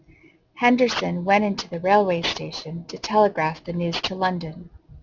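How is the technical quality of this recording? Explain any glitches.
The recording is marred by one fault lasting the whole clip. Throughout, the sibilants sound gritty and metallic, and the spectrum runs hard up to 6 kHz. This is aliasing: the speech points to a drop to a 12 kHz rate without filtering first, so content above 6 kHz folded back as unrelated tones, strong at roughly 10 dB below the signal.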